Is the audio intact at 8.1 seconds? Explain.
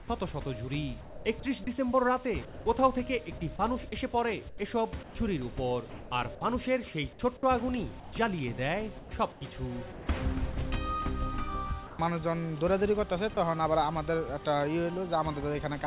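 No. From 8.0 to 8.12 s the sound gives way to steady comfort noise, likely sound dropped by the voice detector; a spectrogram shows a flat, featureless noise patch there.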